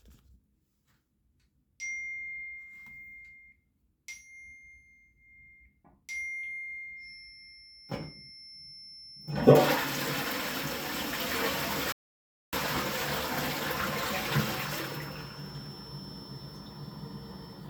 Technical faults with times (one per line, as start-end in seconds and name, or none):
6.95-17.70 feedback whistle
11.92-12.53 audio dropout to silence